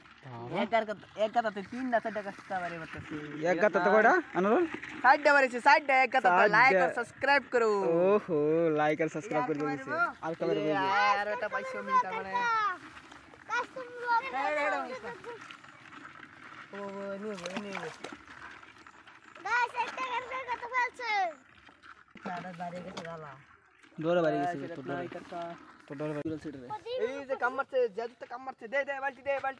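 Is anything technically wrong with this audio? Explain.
No, nothing stood out as technically wrong on listening.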